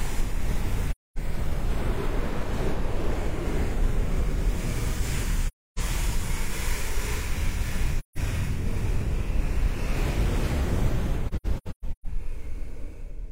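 You'll hear AAC frame loss with muting at 0.9–1.18 s, 5.47–5.79 s, 7.99–8.18 s, and a choppy stretch from 11.28–12.06 s, where gaps run about 150 ms at most. The decoder zeroed the missing frames, so the sound fades into soft-edged holes.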